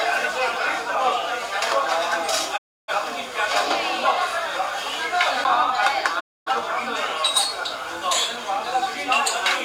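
At 2.56 s the audio fades out over about 20 ms and stays silent until 2.92 s, then fades out the same way at 6.19 s and returns at 6.51 s. Both are digital broadcast dropouts: the receiver stopped getting decodable frames and muted until valid ones arrived. Roughly 300 ms and 260 ms of programme are missing, consistent with about seven and six lost frames. The material then resumes later in the programme, not where it stopped.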